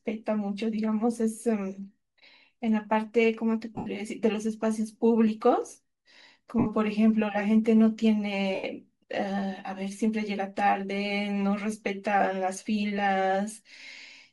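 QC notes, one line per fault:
throughout, Bluetooth LC3 compression: the speech carries a steady breathy, grainy edge, with the upper band sounding like hiss rather than real detail. The likely cause is an LC3 encoder that zeroes much of the high spectrum and fills it with noise, at a rate that fits about 48 kbps and short 7.5 ms frames. Unlike the momentary losses below, this texture never lets up.
3.76 to 3.87 s, 6.59 to 6.66 s, 8.55 to 8.64 s, lost LE Audio frames: each time the speech briefly dissolves into a noisy, smeared wash instead of cutting to silence, lasting about 98 ms (scattered over 105 ms, with the longest unbroken stretch around 70 ms), 68 ms and 90 ms. The decoder repeats the last good spectrum with randomised signs, so the tone turns to noise while the level holds. It fades only as the gap lengthens, which separates this from a hard dropout or a click.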